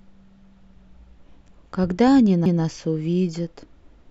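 At 2.46 s the speech has a CD skip. The laser lost its place on the disc's spiral track and landed on another turn. The player muted for only a few milliseconds, then carried on reading from that new position. You hear a brief tick. The speech then resumes from a different point, with a sudden break in its flow. The skip is abrupt.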